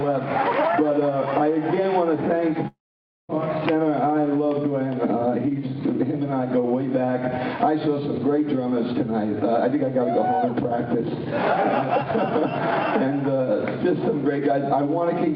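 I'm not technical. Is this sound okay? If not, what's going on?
No. From about 2.67 to 3.31 s the sound drops out for roughly two thirds of a second, most likely a long network dropout. The sound stopped arriving, so the receiving end briefly stretched the last bit into a fading buzz before going quiet for about half a second. When the sound returns, the missing piece is simply gone rather than delayed, so that moment is lost.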